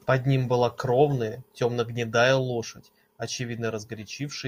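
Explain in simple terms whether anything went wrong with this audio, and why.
Nothing went wrong in this speech recording. Across the whole clip there is no moment where the sound falters or needs explaining.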